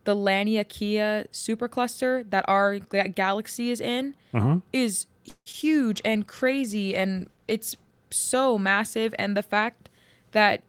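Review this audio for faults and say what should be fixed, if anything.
A call audio freeze runs from 5.29 to 5.48 s. The speech stops advancing and the last sound is stretched into a fading buzz that ends in about 50 ms of silence, then resumes where it left off. This is likely a jitter buffer running dry while packets were held up, inserting a 165 ms gap without losing speech. On a spectrogram it appears as horizontally smeared bands decaying to a blank strip. Enlarging the adaptive jitter buffer and prioritising call traffic would prevent this.

Two short concealed packet losses follow, at 5.52 to 5.55 s and 5.61 to 5.64 s. Each drops about 20 ms of audio, patched by extrapolating the preceding sound and crossfading back, which is heard as a small smear or wobble. The waveform shows brief discontinuities, and the spectrogram shows short blurred slivers. Forward error correction would recover these losses.

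A call bitrate drop spans 5.93 to 9.33 s, with the rate falling from 32 to 15 kbps and staying at its lowest for about 1.8 s. The encoder quantises coarsely and trims the highs, so the speech turns muffled and watery. On a spectrogram the upper band goes dark for that stretch. Better bandwidth estimation and a higher minimum bitrate floor would prevent it.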